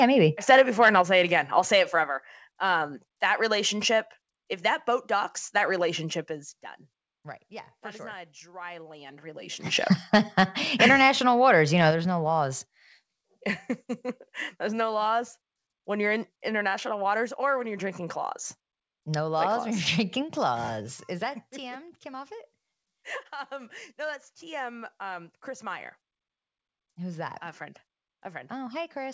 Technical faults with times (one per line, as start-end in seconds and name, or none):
0.24-1.01 microphone overload
1.02 microphone volume stepped down
8.89-9.91 zipper noise
9.66 microphone volume stepped up
11.91 microphone volume stepped down